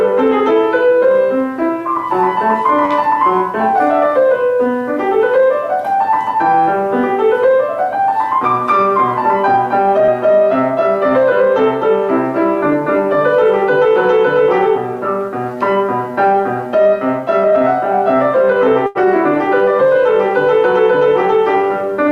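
At 2.85 to 2.93 s there is a short stall from a late packet. The next chunk of audio had not arrived when it was due, so the jitter buffer emptied and the receiver stretched the last sound for about 52 ms. Playback then resumed from exactly where it had stopped. Nothing is lost, but the held sound drags with a faint buzz, and everything after it plays 52 ms later than before.

At 10.06 to 10.10 s comes a short concealed packet loss, which is a different fault. Here about 20 ms of audio never reached the decoder. The receiver covered the gap with roughly 18 ms of continued sound and blended back into the real signal. The result is a brief smear or wobble rather than a drawn-out hold, and a short sound can disappear completely. Unlike the stalls, material is actually gone, and the timing afterwards moves only about 2 ms earlier.

At 18.87 to 18.97 s a second, longer stall from a late packet holds the sound for about 85 ms. 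It adds another 85 ms of delay to the rest of the clip. Again, nothing is missing.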